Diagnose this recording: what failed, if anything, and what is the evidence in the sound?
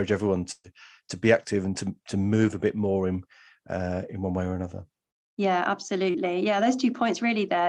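A burst of packet loss on the network, 0.51–0.73 s, before "to be active and": the last sound is stretched and faded, then silent for 30 ms, rather than cutting straight to silence.

Short concealed packet loss at 6.10–6.17 s, after "way or another yeah": about 40 ms missing, filled for 36 ms from the preceding sound, heard as a brief smear rather than a gap.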